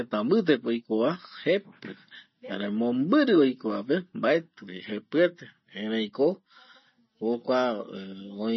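Throughout, MP3 compression likely starves the speech of bits: watery, swirly sibilants, and a spectrogram sheared flat at 5.9 kHz with flickering, blotchy patches below.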